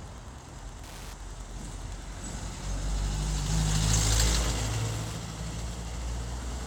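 A nearby Wi-Fi radio is coupling into the audio circuit, which rectifies its beacon every 102.4 ms into Wi-Fi interference: steady ticking about ten times a second, well below these sounds throughout.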